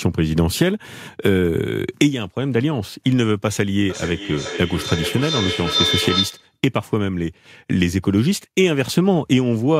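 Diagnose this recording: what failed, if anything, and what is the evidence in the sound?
A shrill tone near 4 kHz swells in from 3.9 s, pulsing roughly every 400 ms and climbing to about 3 dB below the speech before it stops abruptly at 6.57 s. That is feedback howl, an acoustic loop at the call-processing and playback stage: a second device in the same room replays the call through its loudspeaker into a live microphone. Each round trip adds gain at around 4 kHz, so the repeats grow rather than decay until the loop is broken.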